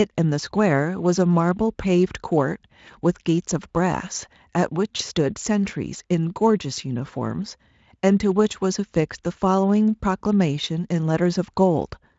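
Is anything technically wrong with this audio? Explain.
Yes. VoIP packet loss concealed by the speech codec, 4.97 to 5.01 s: the decoder extended its last pitch and filter at falling gain, consistent with one lost 20 ms frame, leaving a brief buzzy or noise-like, fading smear.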